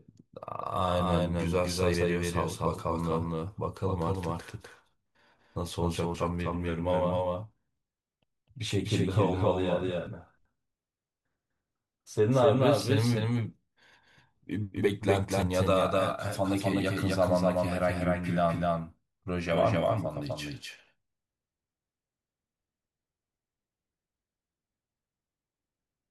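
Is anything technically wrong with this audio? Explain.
Yes. Throughout the clip the speech is a doubled audio track: a second full-band copy at about the same level trails the original by roughly 300 ms, with no decay or room colour on it. That likely comes from the audio being captured twice, once through a slower path, so everything sounds echoed.

At 1.94 s, 6.14 s and 15.42 s there's a dropped buffer (overrun). Each sounds like the speech jumping ahead, and there's no gap of silence. About 70 ms goes missing at the first one and about 20 ms at the others, which is likely because the samples weren't read before the hardware overwrote them.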